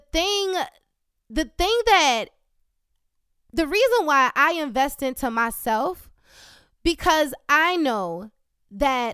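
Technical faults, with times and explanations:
No technical faults can be heard in the clip.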